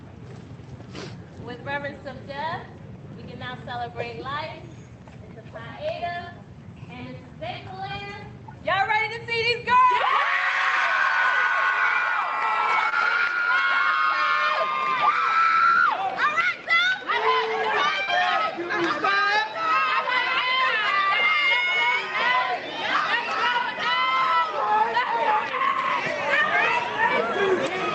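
Brief smears at 12.89 to 12.94 s and 18.04 to 18.09 s, each a short wobble where the sound is stretched over a gap, are short concealed packet loss: about 20 ms and 40 ms of audio arrived too late, and the receiver filled each hole by extending the preceding sound before blending back. The call path's Opus coding limits the top end to about 8 kHz.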